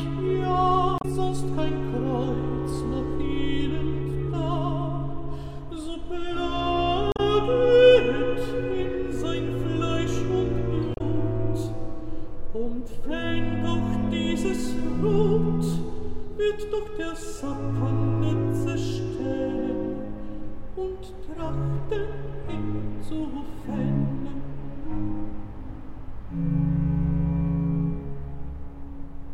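Damaged data in a compressed stream shows up at 0.98 to 1.05 s, 7.12 to 7.20 s and 10.94 to 11.01 s as brief glitches, each about 70 ms. Corrupted bytes there made the decoder misread frames and lose sync until it found the next frame header.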